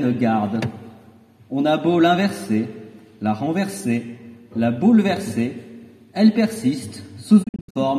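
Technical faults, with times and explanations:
7.42–7.80 s, digital broadcast dropout: the sound breaks into several short silent holes totalling about 216 ms, spread across a window of about 336 ms, with the longest single gap about 72 ms. Each mute arrives through a fast fade of about 20 ms rather than a hard click. The receiver lost valid data and muted until clean frames resumed. The pattern fits nine failed frames of roughly 24 ms each, and the audio in those gaps is gone.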